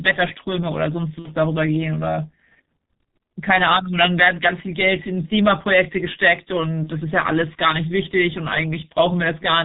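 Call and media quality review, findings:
G.723.1 codec, throughout: speech muffled and hoarse, nothing audible above 4 kHz, consonants smeared. Slow-updating, low-rate vocal model over 30 ms frames; heavy damage that fits the 6.3 kbit/s G.723.1 mode.

VoIP packet loss concealed by the speech codec, 1.19–1.29 s and 6.83–6.90 s: speech stretched into a fading buzzy tone, then a weak, distorted onset. The decoder repeats its last pitch and filter with falling gain. Gaps fit about two lost 30 ms frames, then one.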